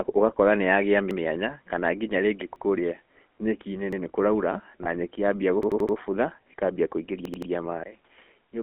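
Throughout, the speech carries the buzzy, gravelly roughness of the GSM full-rate codec at 13 kbps. Its vocal-tract model with pulse excitation smears fine detail. The line passes only about 250 Hz to 3.4 kHz, so everything sounds thin and narrow.

A repeated buffer stutters at 1.11 to 1.20 s, 2.56 to 2.65 s and 3.93 to 4.01 s. New audio arrived late, so the last piece played again. Each repeat is about 85 ms, which fits a 4096-sample buffer. A hard join marks each restart.

From 4.84 to 4.88 s, just before "nyeki yambia", one GSM frame is lost. The decoder reuses the previous frame's settings. This gap of about 20 ms comes out as a brief, rough metallic ring.

After "nyeki yambia", the stutter returns. From 5.63 to 5.97 s, one 85 ms piece plays four extra times. From 7.25 to 7.51 s, it repeats three extra times. Each sounds like a stutter, with a hard join at every repeat.

At 7.83 s, there is a 20 ms silence. 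Then the sound turns dull, about 10 dB quieter. A new noise floor sits roughly 40 dB below the signal. This is likely the input switching to a poorer device.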